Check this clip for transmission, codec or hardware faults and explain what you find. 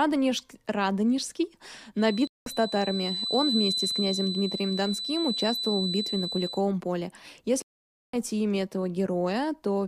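Two faults are audible in the speech. A whistle runs through the middle, and the stream drops out and reconnects twice.

Feedback whistle, 1.94 to 6.66 s: a thin, steady 4 kHz tone sits a little below the speech level and swells and fades slowly. The likely cause is a loudspeaker-to-microphone loop held right at the edge of feedback, so one frequency rings without building up.

Stream reconnect, 2.27 to 2.49 s and 7.62 to 8.16 s: the connection broke, the player fell silent, reconnected and restarted its decoder mid-stream. The first gap lasts 187 ms and the speech resumes about a tenth of a second further on. The second gap lasts 512 ms and the speech picks up roughly 0.4 s later, with "имя этого".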